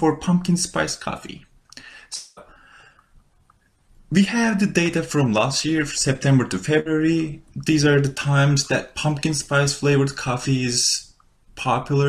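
At 2.15 s the sound stops being fresh and is replaced by a continuation of the preceding sound that buzzes or hisses and fades for about 0.21 s, with no true silence, until 2.39 s. When it resumes, roughly 0.22 s of material is gone. This is likely a long network dropout, where nothing arrived and the receiver concealed the gap.

From 6.80 to 6.88 s a burst of packet loss leaves about 60 ms missing. The receiver fills roughly 58 ms by extending and attenuating the last sound into a brief held buzz or fading hiss. Playback then resumes further along, skipping that short section.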